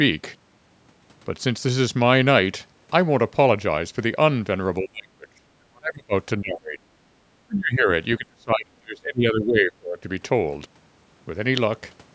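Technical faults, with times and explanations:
4.81–6.13 s, 6.40–6.85 s, 7.46–7.88 s and 8.18–10.07 s: speech suppressed in double talk. The speech dips sharply and breaks up in pieces, dropping by about 25 to 35 dB at its deepest. The likely cause is an echo canceller turning everything down while both sides talked at once.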